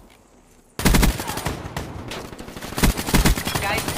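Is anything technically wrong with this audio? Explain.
Yes. There are two brief discontinuities, at 0.79 s and 2.77 s, caused by overlap between stream segments. The audio arrives in 2.0 s segments whose timestamps overlap slightly, and the player discards the overlapping portion even though that sound was not actually duplicated. About 6 ms is lost at the first point and about 14 ms at the second, so the waveform jumps abruptly. Each is heard as a short click or tiny skip.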